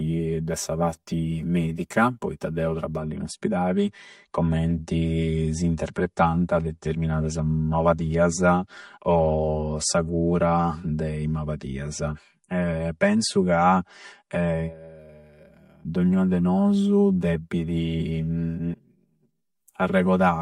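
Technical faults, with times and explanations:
Throughout, channel delay (comb filtering). One channel arrives roughly 5 ms behind the other, and the two are summed to mono. Where the shared sound meets itself half a cycle out of step, it cancels. The first notch falls near 100 Hz, with further notches repeating evenly up the spectrum. Those fixed gaps make the speech sound hollow and phasey, as if heard down a tube.
2.99 to 14.99 s, adaptive stream at a lower bitrate. Right after "parti medica poitta deu", the quality drops suddenly with no gap. The sound points to a switch from about 128 kbit/s MP3 down to 48 kbit/s, likely because the connection slowed. The leaner encoding discards the top end, so nothing remains above 11.2 kHz. Sibilants lose their crispness and coding artefacts grow. At 14.99 s the fuller version returns just as abruptly.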